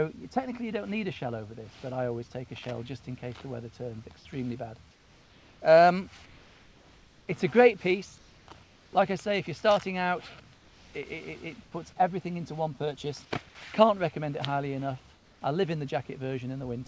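In the pauses at 4.91–5.60, 6.26–7.28, 8.18–8.48, 8.63–8.93, 10.55–10.94, 11.63–11.72 and 15.14–15.41 s, comfort noise replaces the background: a flat, textureless hiss about 2 to 4 dB quieter than the real room tone. Unlike a dropout or noise gate, the gap never goes silent. It is likely discontinuous transmission filling silences synthetically. Across the call path, nothing is heard above 8 kHz, which fits a G.722 wideband codec.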